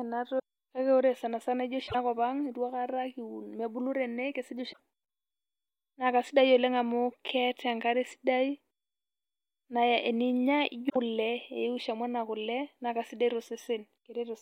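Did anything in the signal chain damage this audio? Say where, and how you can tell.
Yes. Short glitches cut into the speech at 0.35–0.40 s, 1.84–1.95 s, 4.69–4.79 s and 10.86–10.96 s. This is damaged data in a compressed stream at the codec stage: corrupted frames decode as garbage until the decoder regains sync on a valid frame header.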